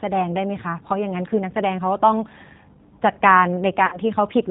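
Throughout, the speech sounds dull above 4 kHz and plainly rough and synthetic, the mark of the G.729 codec rebuilding each frame from a coarse 8 kbit/s model. From 3.86 to 3.99 s, the voice smears into a fading, stretched sound and stays weak. This is VoIP packet loss concealed by the speech codec: roughly 60 ms of audio went missing, consistent with three 20 ms packets, and the decoder extrapolated from its last frame and lowered the gain.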